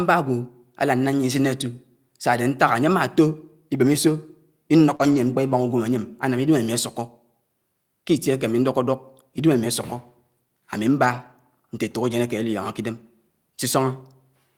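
At 4.95 s the speech suffers a short concealed packet loss: about 40 ms never arrived in time, so the receiver stretched the preceding sound across the hole and faded back into real audio at 5.01 s. It comes across as a brief smear or wobble. What marks it as concealment is that the filler only continues what came before, so nothing new is said inside that moment.

Overlapping it, from 4.99 to 5.17 s, is a lost packet rebuilt from error correction, a 100 ms stretch that fits a run of five 20 ms packets. The same fault returns from 11.05 to 11.31 s (140 ms) and from 12.95 to 13.01 s (40 ms). In each, the decoder played the low-bitrate backup copy carried in the following packet, so the speech keeps moving with no gap or smear, but it turns grainier and noisier for that span. Unlike concealment, the actual content survives, only at reduced quality.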